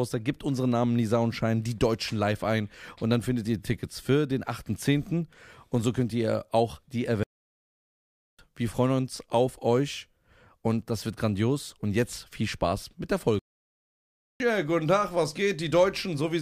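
A German speech recording in which the sound cuts out to silence twice in mid-flow: first from 7.23 to 8.39 s, about 1.15 s, right after "könnt ihr auch die" and before "wir freuen uns auf", then from 13.39 to 14.40 s, about 1.0 s, after "mit der". These are playback stalls, likely from the player running short of buffered data or its output thread being blocked, so nothing reached the output until it caught up.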